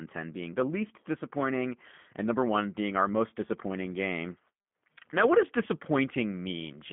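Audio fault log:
Throughout, G.729 codec: speech sits within roughly 150 Hz to 3.4 kHz, nothing above 3.5 kHz, with a plainly rough, synthetic grain. That fits an 8 kbit/s coder rebuilding it from a vocal-tract filter and sparse pulses; plain telephone band-limiting sounds muffled but clean.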